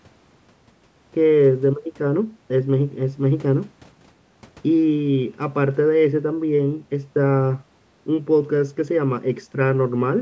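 Nothing stood out as a technical fault on listening to this speech, which has the ordinary character of call microphone processing with nothing above 8 kHz.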